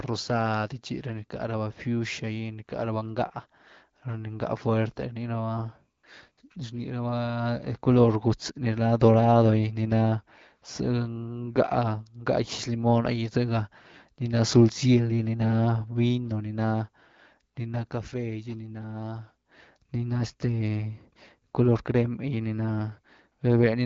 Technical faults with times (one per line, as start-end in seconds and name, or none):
5.97-6.03 AMR comfort noise
6.31-6.37 AMR comfort noise
21.51 AMR comfort noise